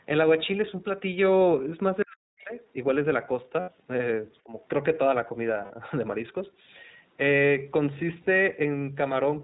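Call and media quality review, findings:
iLBC codec, throughout. Narrowband: nothing above 4 kHz. Speech clear but rough, slightly synthetic, consistent with a 15.2 kbps iLBC stream coding each 20 ms frame independently. Codec damage plainly audible across the whole clip. The mic chain's high-pass is normal processing; the codec sets the actual ceiling.

Speech suppressed in double talk, 2.04–2.57 s and 4.44–4.53 s. Talker's level dips sharply, deepest around 40 dB over roughly half a second, then a milder dip of about 15 dB for about a tenth of a second. Likely cause: echo canceller unable to separate near talker from loudspeaker echo during simultaneous talk, so it attenuated both.

Other side's voice leaking through, 2.38–2.44 s. Brief scrap of a second voice, about 30 dB below the talker, inside the first suppression dip. Likely residual far-end echo: loudspeaker playback picked up by the microphone and not fully cancelled.

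Lost iLBC frames, 3.60–3.70 s, 5.64–5.72 s, 8.22–8.27 s. Gaps of 80, 60 and 40 ms filled by a held, buzzy vowel-like sound, fitting four, three and two 20 ms frames lost. Decoder concealment repeating the last pitch cycle with noise. Speech recovers immediately after each gap because frames decode independently.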